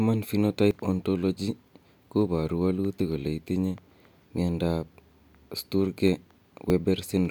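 At 0.71, 3.0 and 6.7 s the speech jumps forward, losing roughly 20 ms, then about 10 ms twice, most likely a dropped buffer (overrun). Unlike a dropout, no silent gap appears; the two sides butt together directly.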